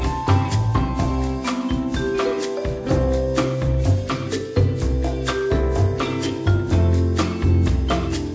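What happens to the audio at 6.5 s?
Nothing goes wrong at 6.5 s: the audio is intact there, carrying on cleanly through the call's microphone processing with no dropout, click or distortion.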